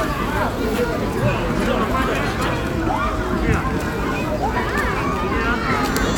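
Sound recording, no technical faults to report.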